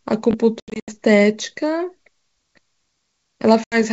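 At 0.31 to 0.34 s, chunks out of order: a 10 ms chunk was delivered two chunks late, so it plays after the two that should follow it. No sound is lost, but the reshuffled fragments and their hard joins make a brief jumbled flicker.

Packet loss on an ADPCM call then strikes twice. From 0.60 to 0.96 s, about 200 ms of audio is scattered across 280 ms, fitting roughly ten lost packets, with the longest gap 80 ms. At 3.64 to 3.83 s, another 80 ms goes, perhaps four packets. Each missing packet becomes an abrupt silent hole. Because the decoder's adaptive predictor and step size lose track of the sender's, the speech comes back slightly distorted, settling within tens of milliseconds. The G.722 wideband coding at 64 kbit/s shows its usual bandwidth up to 7 kHz, with at most a faint hiss in the upper band.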